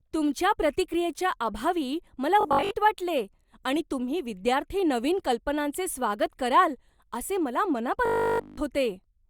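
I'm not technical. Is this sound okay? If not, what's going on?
No. Robotic sound from repeated short buffers occurs at 2.41 to 2.71 s, after "तुमच्या प्रतिक्रियेच्या अभावी मला", and at 8.06 to 8.58 s, after "स्वागत कराल असे मला". The speech becomes a rigid 50 Hz metallic buzz, likely because audio arrived too late and playback kept looping the last 20 ms.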